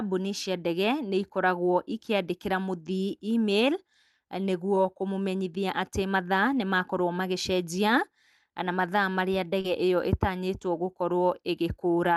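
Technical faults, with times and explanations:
4.75 s and 9.61 to 9.65 s, short concealed packet loss: about 10 ms and then 30 ms of the call arrived too late to decode. The receiver extended the preceding sound to cover each gap and blended back, leaving a brief smear at 4.75 s and a longer smear near 9.6 s.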